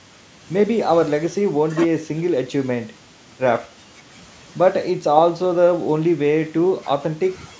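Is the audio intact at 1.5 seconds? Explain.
Yes, the speech at 1.5 seconds is intact, with only the normal band limit of call microphone processing, which leaves nothing above 8 kHz.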